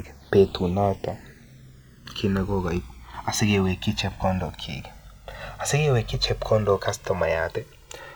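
Speech, with the channels drifting apart throughout. Separate clocks, off by around 300 ppm, let the delay slide to about 2 ms, so mono playback sweeps into slow flanging.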